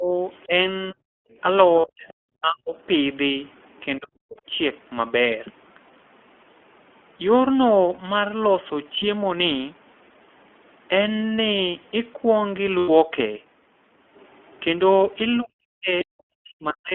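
iLBC codec coding runs through the whole speech clip, with nothing passing above 3.4 kHz and a slightly rough, synthetic edge that fits a 15.2 kbps, 20 ms-frame narrowband coder. Speech is suppressed in double talk from 0.0 to 2.75 s, 3.99 to 4.37 s and 15.39 s to the end: the talker drops by as much as 40 dB in pieces, likely because an echo canceller ducked the talker together with the loudspeaker echo. The other side's voice leaks through faintly, far below the talker, from 0.3 to 2.14 s and 3.54 to 3.81 s, likely from loudspeaker echo that the canceller did not fully remove. Lost iLBC frames at 1.80 s and 7.94 s, each 40 ms, and at 12.78 s, 100 ms, come out as short, held, buzzy vowels where the decoder repeated the last pitch cycle. The voice is right again almost at once because each frame decodes on its own.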